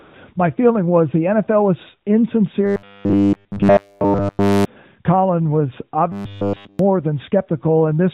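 Right at the start, from 0.0 to about 0.14 s, there's AMR comfort noise. For that first 135 ms the phone treated the line as silent and sent no speech frames, so the receiver filled the gap with synthetic noise built from a rough sketch of the background's level and spectral shape. What you get is a short, smooth, even hiss standing in for the real room sound, and then the actual audio cuts in when speech frames resume.

From 2.66 to 4.65 s, and again from 6.12 to 6.79 s, the sound goes robotic, likely from repeated short buffers. New audio isn't arriving fast enough, so the playback side keeps looping the last bit it had, and here essentially all of it is repeats. The loop imposes a fixed 100 Hz buzz, which fits a 10 ms buffer, so the sound becomes a flat, metallic drone that only loosely tracks the original contour. Underneath it all is the narrowband AMR-NB call path, so nothing above 4 kHz comes through.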